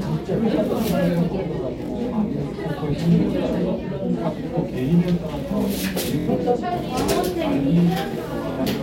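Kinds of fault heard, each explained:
Bluetooth stutter: late wireless packets made the receiver replay its last slice; three brief stutters, up to 70 ms, appear as repeated identical waveform blocks.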